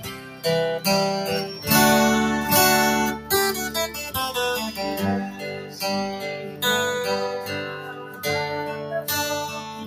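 A noise suppressor applied to music or sounds runs through the whole clip. A processor tuned for speech treats sustained and ambient parts of this audio as noise, so the level swings by around 10 dB and held sound and tails thin and pump while attacks pass. Sound cut by the noise suppressor is clearest at 0.0–0.44 s (about 8 dB down), 5.29–5.77 s, 6.37–6.62 s and 7.77–8.23 s (each about 7 dB). In these stretches steady or decaying material sinks below its surroundings, with decays cut short.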